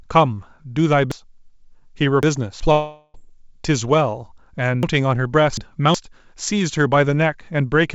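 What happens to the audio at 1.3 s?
A chunk of about 370 ms arrived three chunks late, so chunks play out of order from 1.12 to 2.60 s, producing a jumbled stretch.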